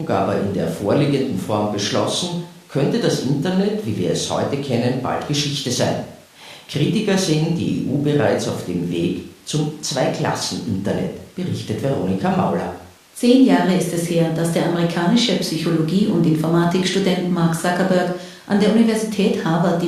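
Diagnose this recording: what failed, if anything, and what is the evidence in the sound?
Nothing in this speech recording stood out on listening as a failure at any stage of the chain.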